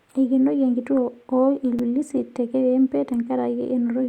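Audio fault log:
1.79 s, block of digital silence: there's a quick tick right here where the speech drops to silence for about 5.8 ms and then snaps straight back. Nothing fades in or out, so the waveform jumps at both edges and you get a click instead of a hole. A gap that short, with that clean cut, fits a 256-sample buffer that most likely didn't get filled in time.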